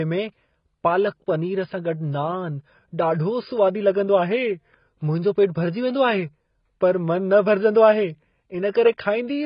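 Speech, with heavy AAC compression throughout: nothing survives above 5.1 kHz, and the remaining band sounds dull and smeared, with warbling on sibilants. That likely comes from AAC-LC near 16 kbps, and the warble, absent from a simple low-pass filter, gives it away.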